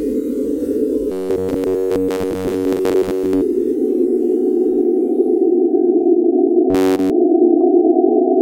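From 1.12 to 3.42 s the sound turns into a rigid metallic buzz near 93.8 Hz, robotic sound from repeated short buffers, likely from starved audio input looping a roughly 10.7 ms chunk over most of that stretch. It returns, fully repeated, from 6.70 to 7.10 s.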